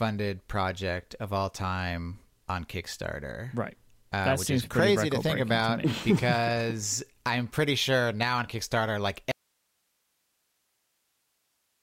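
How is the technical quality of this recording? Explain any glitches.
The recording has one clear glitch: an audio dropout to a faint residue starting at 9.32 s and lasting to the end of the clip. The speech stops abruptly mid-flow and only low hiss remains, roughly 45 dB below the speech level. The likely cause is the signal feed being lost while the recording chain after the break stayed live, capturing its own noise floor. It differs from a natural pause or fade because the cut is instant and the hiss holds steady rather than tailing off.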